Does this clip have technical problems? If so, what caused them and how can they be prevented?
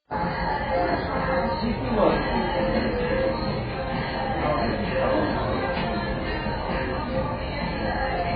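Yes. Likely heavy AAC compression at a very low bitrate, around 12 kbps, throughout: nothing survives above 4.9 kHz, leaving the sound dull, smeared and warbly. Encode at a higher bitrate to prevent it.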